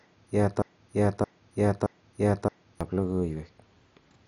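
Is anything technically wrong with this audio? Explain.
Yes, two problems are audible in this speech.

Throughout, the audio sounds dull, with a gurgling, granular texture that is likely MP2 compression at a low bitrate, roughly 48 kbps. Starved upper sub-bands are switched off, so a spectrogram shows a hard ceiling near 11.3 kHz, with flickering, blocky patches beneath it.

From 0.62 to 2.81 s there is a broken-record loop: a 0.62 s fragment repeats exactly, back to back, four times, and the audio meant for that stretch is lost. The likely cause is a stalled player or stream resending its last buffer. The waveform shows identical repeating segments.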